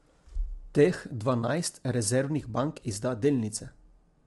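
From start to end, the speech carries plainly audible codec damage. The voice sounds rough and grainy. Noise fills the gaps between the pitch harmonics. Nothing is present above 11.6 kHz, so the top band is cut off. The likely cause is low-delay AAC compression, the AAC-ELD kind used in video calls. Its short frames resolve harmonics poorly and spend extra bits. The damage fits a low bitrate near 32 kbps.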